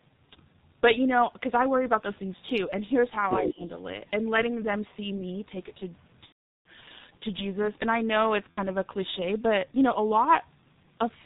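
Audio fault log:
Throughout: G.723.1 codec, heavily damaged at about 6.3 kbit/s. Everything above 4 kHz is gone, so the speech is muffled. The codec's voice model only refreshes every 30 ms frame, and at this bitrate it can't track fast changes, which makes the voice sound hoarse and smears the consonants together. You hear it on every phrase. It isn't a local glitch, it's simply what this low-rate telephony coding does to speech.
3.37 to 3.63 s: speech suppressed in double talk. The talker's level dips by about 10 dB for roughly a fifth of a second. The likely cause is an echo canceller that heard both ends talking at once and couldn't tell this talker from loudspeaker echo, so it ducked everything until it settled again.
6.26 to 6.68 s and 8.52 to 8.59 s: VoIP packet loss concealed by the speech codec. The first gap covers 390 ms of missing audio and the second covers 60 ms. In both, the decoder keeps repeating its last pitch and filter while fading the gain, so the sound is stretched and dies away, and in the long gap the decoder mutes it from the third lost frame on. 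The long one is clearly worse, and the voice stays weak or distorted for a moment after real packets resume.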